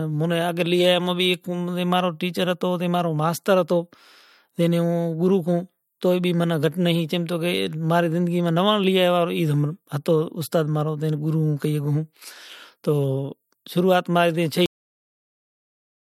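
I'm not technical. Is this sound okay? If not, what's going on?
No. This speech clip has a cut-off end: the final stretch was never recorded, so after "شروعات مارے تے" at 14.66 s the sound stops mid-word into dead silence.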